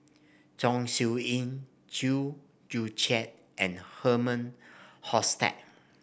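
Listening to this speech recording, nothing technical stood out at any point.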